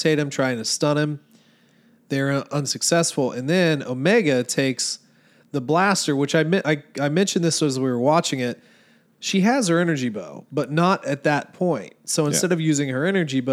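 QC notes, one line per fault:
Nothing stood out on listening to this speech clip.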